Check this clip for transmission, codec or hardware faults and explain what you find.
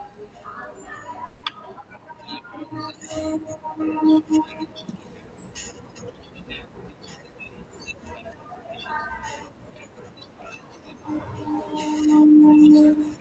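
One transmission fault is audible, a gap in the speech early in the clip.

From 1.25 to 1.45 s there is a long network dropout, likely caused by a stretch of packets that never reached the receiver. About 180 ms of the speech is missing. The receiver covered the whole gap by extending the last sound into a buzzy, fading continuation, so there is no dead silence. When the speech resumes, the lost portion is simply absent. The surrounding audio carries the call path's coding noise, with content stopping near 8 kHz.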